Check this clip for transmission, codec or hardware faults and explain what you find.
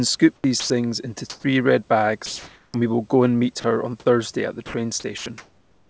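Several voice-detector faults appear in this speech, all tied to discontinuous transmission on a call link. The audio runs through a wideband call codec with nothing above 8 kHz, and the room noise sits about 41 dB below the speech.

Comfort noise in place of the background occurs at 0.36–0.70 s, 1.30–1.44 s and 2.26–2.74 s. The sender likely stopped transmitting during the pauses. The receiver then generated synthetic noise roughly matched to the room. The real background, about 35 to 37 dB below the loud parts, becomes flat and featureless. Its level shifts by about 4 dB in the second pause and about 2 dB in the third.

Sound dropped by the voice detector occurs at 0.60–0.70 s, inside the first comfort-noise stretch. The detector likely mistook a quiet stretch of speech for background and stopped sending. About 60 ms of real sound is lost. In its place is the same steady synthetic hiss. 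The speech simply thins out into noise and returns when transmission resumes at 0.70 s.

An onset clipped by the voice detector occurs at 2.72–2.74 s, where the long pause ends. The detector likely reacted late when speech started again. The first 20 ms were never sent, and comfort noise covers them. The result is a word that starts abruptly, without its soft lead-in.

Sound chopped by the voice detector occurs at 3.60–4.06 s and again from 4.66 s to the end. The detector likely toggled between sending and not sending several times. About 100 ms is replaced in the first stretch and about 0.68 s in the second. Quiet syllables and word edges vanish into fill. The speech sounds choppy.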